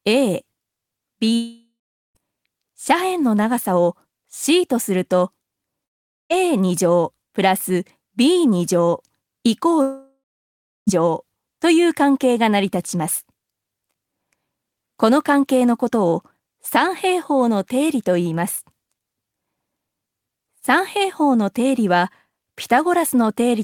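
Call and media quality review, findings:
Gaps at 1.35–2.17 s, 5.85–6.32 s and 9.82–10.89 s. Tail of prior sound smeared, fading to silence. Audio resumes with 0.8, 0.46 and 1.06 s missing. Likely long network dropout. Receiver concealment extends, then mutes.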